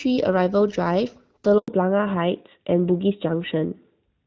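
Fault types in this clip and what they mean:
handover gap: The call switches networks and no speech frames arrive meanwhile, so the sound dies away almost at once and stays silent for 100 ms, from 1.58 to 1.68 s. Unlike packet-loss dropouts, there is no concealment buzz, and the sound changes character afterwards.
fallback to narrowband: From 1.68 s to the end, everything above 4 kHz disappears and the sound turns duller and rougher, which fits a drop from AMR-WB to the older AMR-NB codec. Unlike a plain low-pass filter, it starts exactly at the handover silence and persists.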